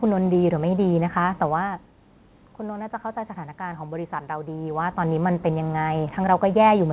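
No technical faults can be heard in this speech recording. Nothing reaches above 4 kHz, which fits a narrowband G.711 call path, and the level changes around 1.5 s and 4.5 s come from the talker moving relative to the microphone.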